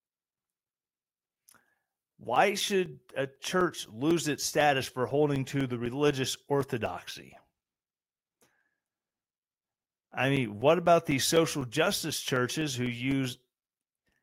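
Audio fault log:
0.11–14.12 s, periodic USB or driver dropouts: every 0.25 s a few milliseconds of the speech, roughly 4 ms, drop to silence as something stalls the USB bus or audio driver, giving an even train of ticks heard only while speech is present.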